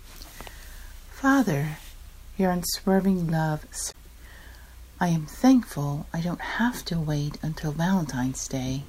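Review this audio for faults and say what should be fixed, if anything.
There's one spot of damaged data in a compressed stream, 3.88 to 3.95 s: a short glitch where the decoder misreads corrupt frames and hunts for sync. Worth checking the transfer or storage path with checksums so corrupted bytes get caught and resent before decoding.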